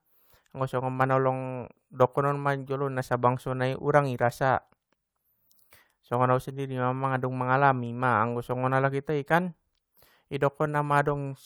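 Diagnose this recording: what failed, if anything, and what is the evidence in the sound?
Nothing failed; no fault is audible in this speech.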